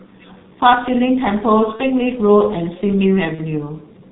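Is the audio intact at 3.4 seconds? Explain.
No. From 3.35 to 3.41 s there is VoIP packet loss concealed by the speech codec. The decoder bridged the gap by extending its last pitch and filter state at falling gain, so the speech is briefly stretched and fades. The length fits a single lost 30 ms frame.

Underneath, the G.723.1 codec runs through the whole clip, heavily degrading the audio at this point too. Nothing above 4 kHz passes, and the slow-updating voice model leaves speech muffled and hoarse with smeared consonants, consistent with a rate around 6 kbit/s.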